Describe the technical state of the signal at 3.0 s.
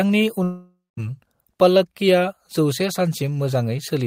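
At 3.0 s the speech signal is intact, with no audible fault at that moment.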